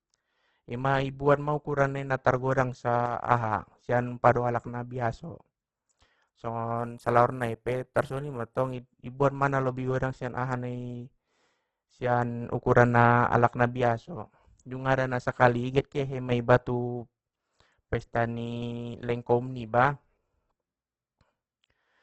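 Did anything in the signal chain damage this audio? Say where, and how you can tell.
Yes. At the codec stage, likely Opus compression near 12 kbps: the speech is grainy and rough throughout, with nothing above 12.1 kHz. It is noisy rather than MP3-like swirling.

At playback or channel routing, one channel drops out from 3.06 to 3.31 s and from 15.79 to 16.32 s. The level falls abruptly by about 6 dB, likely from losing one side before the mono sum. A gain fade would ramp instead.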